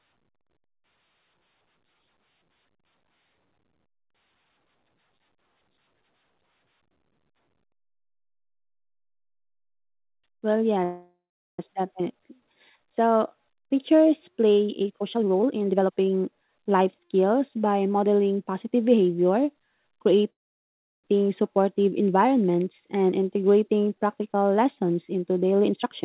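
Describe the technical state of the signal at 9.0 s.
At 9.0 s the speech is intact, with no dropout, glitch or distortion, only the steady narrowband character of the call path, which carries nothing above 4 kHz.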